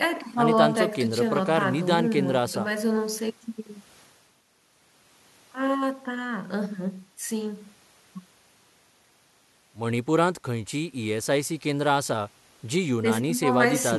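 No technical faults can be heard at any point in the recording.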